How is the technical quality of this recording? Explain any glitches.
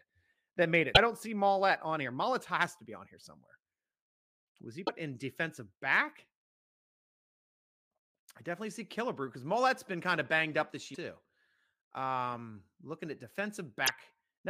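The recording has four short glitches, all from damaged data in a compressed stream. They fall at 0.90 to 0.97 s (after "that made", before "don't see"), 4.82 to 4.89 s (before "in defensive back"), 10.91 to 10.97 s (after "of banged up this") and 13.83 to 13.89 s. Each lasts about 50 to 70 ms. At each point the stored bytes are wrong, so the decoder misreads or rejects those frames, loses its place and hunts for the next valid frame header. The result is a brief chirp, squawk, click or gap. A plain level dropout would leave a clean silence, but these breaks come from the decoder failing on bad frames.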